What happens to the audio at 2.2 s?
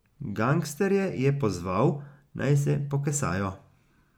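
Nothing goes wrong at 2.2 s; the speech runs on intact through that moment, with no dropout, click or other fault.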